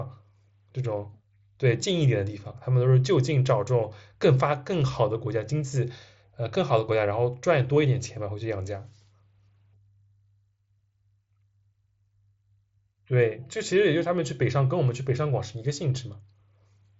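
No technical faults can be heard in this speech clip. It carries the character of a Bluetooth mSBC headset link, with nothing above about 7.7 kHz and a light layer of codec coloration.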